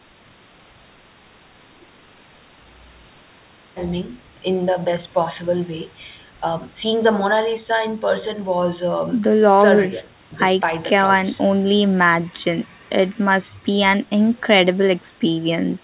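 Nothing goes wrong anywhere in this speech recording; it just has the narrow, phone-like sound of a call line, with nothing above about 4 kHz, which fits an ordinary G.711 telephone codec.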